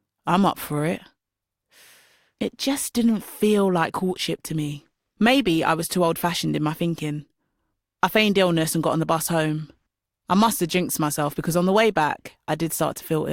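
No technical faults can be heard anywhere here.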